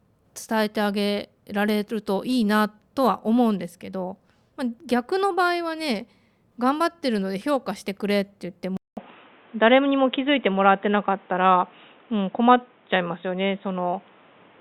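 At 8.77 s a 200 ms silence falls, and from then to the end the speech loses everything above 3.8 kHz, turning dull and boxy, with a level shift of around 5 dB and a fresh noise floor roughly 35 dB down. That gap, level step and new noise, rather than a bare bandwidth cut, point to an input switched to a poorer device as the likely cause.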